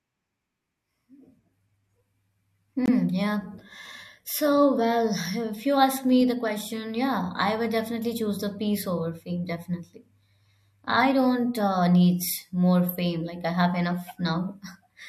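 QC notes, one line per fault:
2.86–2.89 s, corrupt frame muted: the speech drops abruptly to silence for about 34 ms, then resumes with no shift in timing. Damaged bits in the compressed stream made the decoder reject the data, and the player filled the gap with silence; the length fits a single lost frame. On the waveform this is a flat, near-silent hole with sharp edges, and on the spectrogram a clean vertical blank band across all frequencies.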